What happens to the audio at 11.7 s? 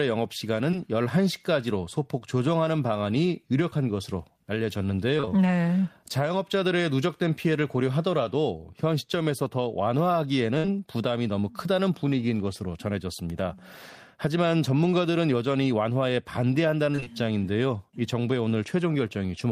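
Nothing goes wrong at 11.7 s; the speech continues intact through that moment with no dropout, click or distortion.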